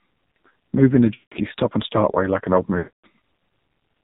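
Throughout, the speech sounds thin, buzzy and synthetic, with nothing above 4 kHz and heavy codec damage. This is the AMR narrowband mobile codec at work. The signal is cut down to telephone bandwidth, and the voice is rebuilt from a simple model of the vocal tract excited by a handful of pulses. The depth of the damage points to a low bitrate of around 5.9 kbps.

From 1.14 to 1.36 s the voice smears into a drawn-out, warbling tone that sags in level and briefly drops away. It returns rough and weak. These are lost AMR speech frames. When the audio fails to arrive intact, the decoder keeps repeating its last good pitch and vocal-tract settings at falling gain. About 180 ms is missing here, which fits roughly nine frames.

A longer gap follows at 2.78 to 3.05 s. The smearing stretches further and fades fully to silence before the speech recovers. This time about 260 ms is lost, which suggests around thirteen consecutive frames.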